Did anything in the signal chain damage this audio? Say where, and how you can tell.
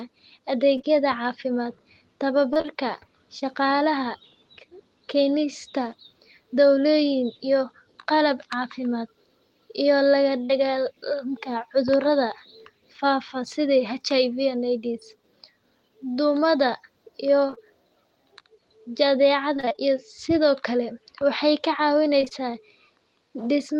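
Yes, the damage happened on the network stage, in what arrived at the decoder. There's short concealed packet loss at 0.77–0.85 s, which is two back-to-back holes of about 20 ms each, and at 10.45–10.51 s, about 40 ms. Each one is a brief smear where the receiver stretched the last bit of sound across the gap.

There's also repeated packet loss, heard as robotic sound: 2.53–3.43 s (five gaps), 17.47–17.59 s right after "duumada iyo", 19.57–19.89 s (six gaps), and 22.21–22.32 s after "kale waxay ka". The gaps run about 20–26 ms, and patches cover nearly half the later spans, so the audio goes choppy with pieces missing.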